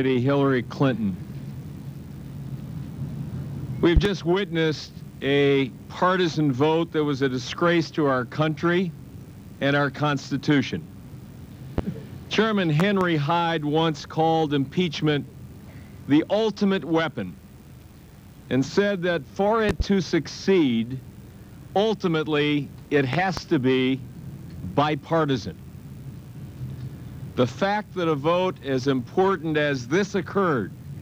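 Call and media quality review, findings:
Loud pops, single at 11.78–11.81 s, doubled at 3.97–4.09, 12.80–13.04, 19.69–19.83 and 23.13–23.41 s. About 15 dB over the signal, which continues underneath, unlike a dropout. Likely a voltage transient from a plug, switch or static discharge.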